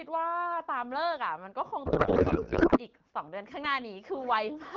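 From 1.86 s to 2.80 s the speech collapses into garbled noise and warble that barely tracks it. This is a codec payload misread: octet-aligned AMR frames are being unpacked as bandwidth-efficient, so fields land in the wrong places. The surrounding AMR-WB audio is clear.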